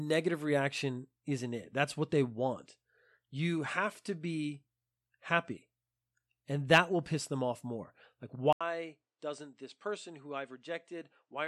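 At 8.53 s an 80 ms silence breaks the speech. It resumes duller, about 10 dB quieter, with nothing above 9.2 kHz and faint new background noise. Tone, level and noise changing together, not filtering alone, point to the input likely switched to a poorer device.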